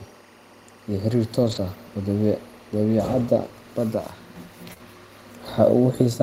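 Timecode bleed runs through the whole speech clip. A faint chirping warble switches between tones near 1 and 2 kHz, well below the speech. Its rate fits 23.976 fps code.

From 1.43 to 1.57 s, a lost packet is rebuilt from error correction, which fits several packets. About 80 ms is replaced by low-bitrate copies. It sounds rougher and noisier. Another single rebuilt frame follows at 4.69 s.

Short concealed packet loss follows at 4.73 to 4.78 s and again at 4.78 to 4.81 s. About 20 ms is missing each time. The decoder extends the last sound, leaving a brief smear.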